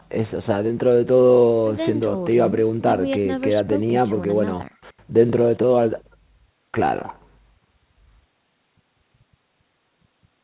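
No technical faults are audible.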